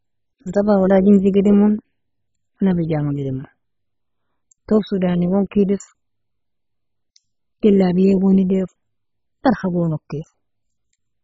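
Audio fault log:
throughout MP2 compression. The speech is dull, with nothing above 7.5 kHz. A heavy gurgling, granular distortion runs through every phrase, and the upper range flickers in and out. This is likely MPEG Layer II coding at a bitrate so starved that it points to around 16 kbps. The coder splits the sound into sub-bands and cannot fund them all. It switches the top bands off and quantises the remaining bands coarsely.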